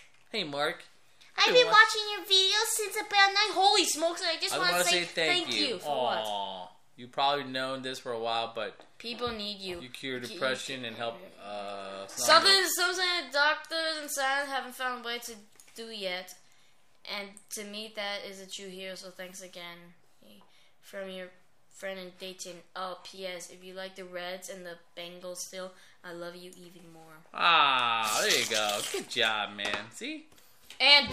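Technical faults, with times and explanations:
No technical faults can be heard in this audio.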